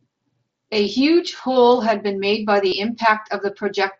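At 1.37 to 1.39 s and again at 2.68 to 2.72 s, concealed Bluetooth headset packet loss briefly replaces the speech with a copy of the waveform just before it, roughly 22 ms and 38 ms of repeated material. The second, longer one turns into a short buzzy, level tone with a slight warble as real speech resumes. An ordinary dropout would leave silence or a click, not held sound. The wideband mSBC link adds a light graininess on loud sounds.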